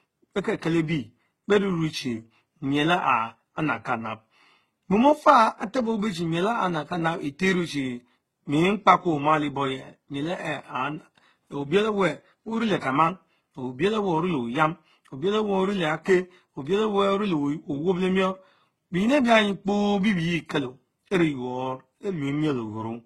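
From start to finish, the speech carries the marks of transcoding between lossy codecs. Nothing is heard above 13.2 kHz, a ceiling set by the narrowest stage and never restored. The artefacts of the different codecs are heard together. Two different sets of coding artefacts seem layered on each other. The likely cause is a chain through HE-AAC, then Opus, then HE-AAC again. The first pass sounds very low-rate, around 12 kbit/s. Each later encoder spent bits reproducing earlier damage.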